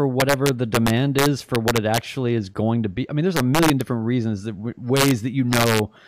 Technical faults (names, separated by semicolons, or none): integer overflow